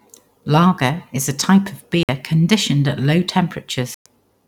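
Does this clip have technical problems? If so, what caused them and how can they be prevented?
Yes, the speech cuts out twice: a short hole from 2.03 to 2.09 s (56 ms) and a longer one from 3.94 to 4.06 s (112 ms). Both gaps are dead silence, and the speech picks up afterwards as if it had kept running. That points to a likely Bluetooth dropout, where audio packets missed their deadline to the headphones and got thrown away. To prevent it, keep the device close with a clear line of sight, away from busy 2.4 GHz traffic.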